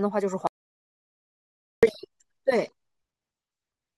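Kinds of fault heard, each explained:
Audio dropout to silence: the speech cuts off abruptly at 0.47 s and comes back at 1.83 s, leaving about 1.36 s of dead silence with no room tone at all. That's likely the input dropping out while the recorder kept writing silence, so that stretch is simply gone.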